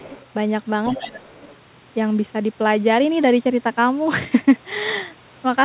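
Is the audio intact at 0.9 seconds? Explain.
No. From 0.86 to 0.98 s there is other side's voice leaking through, a faint second voice about 20 dB below the talker. The likely cause is an echo canceller leaving loudspeaker sound in the microphone signal. On a spectrogram it appears as weak, separate harmonic traces under the main speech.

Right after, from 0.98 to 1.28 s, comes speech suppressed in double talk. With both sides active, the canceller likely turns the talker down by as much as about 25 dB, so the waveform envelope sharply narrows and the spectrogram thins into gaps.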